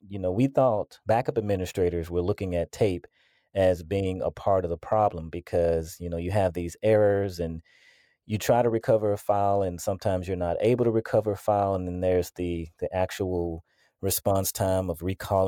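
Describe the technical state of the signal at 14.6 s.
At 14.6 s the speech has pre-emphasis left on, from 13.30 s (just after "then there's the the") to the end at 15.47 s. A treble lift that fits a 50 µs FM curve was never undone, leaving about 11 dB extra at 10 kHz. The sound is thin, bright and hissy-sibilant. Unlike a fixed treble shelf, the boost keeps climbing with frequency.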